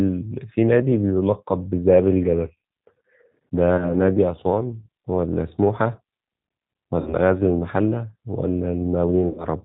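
Throughout, the speech carries the G.729 codec's plainly audible damage: rough, slightly synthetic timbre rebuilt from a filter, pitch predictor and sparse pulses, consistent with an 8 kbit/s G.729A stream. A spectrogram shows nothing above 4 kHz and smeared, blocky harmonics.

VoIP packet loss concealed by the speech codec appears at 3.77–3.94 s, 7.00–7.15 s and 9.28–9.46 s, with about 20, 60 and 100 ms missing. The decoder stretches the last pitch and filter into a fading buzzy tone or coloured noise, so the spectrogram shows a frozen, decaying stretch and the waveform shrinks as the gain drops.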